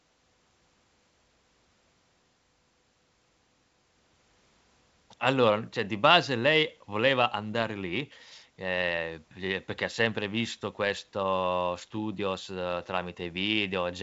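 The speech has passed through G.722 wideband telephone coding at 64 kbit/s, which holds the band up to about 7.7 kHz with nothing above it, and no technical faults are audible.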